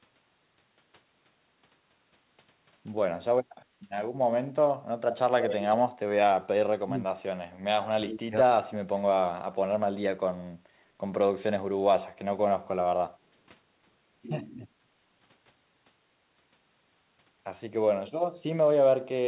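From 5.12 to 5.81 s a second copy of the speech trails the original by about 150 ms, only slightly quieter, which sounds like an echo leak, likely from a far-end loudspeaker echo the canceller did not fully remove. A spectrogram shows each speech pattern repeated, shifted right.

The speech then sinks abruptly at 6.79 to 7.28 s, 7.96 to 8.50 s and 8.68 to 9.51 s, by around 30, 30 and 35 dB at their deepest, as if speech were suppressed in double talk, with the canceller ducking this talker while the other side spoke. The waveform shows collapsing envelopes, and the spectrogram shows energy fading to near-blank gaps.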